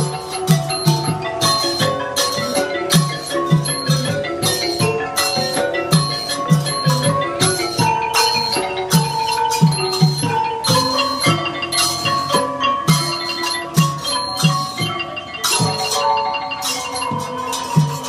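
Sharp cracks break into the audio at 0.51, 0.88, 2.96, 8.95, 12.90 and 13.79 s, the signature of integer overflow. At each, a loud peak that only just reaches full scale passes the largest integer and wraps to the opposite sign instead of being held at the limit. On a waveform each shows as a vertical jump from one rail to the other. On a spectrogram each is a thin broadband stripe.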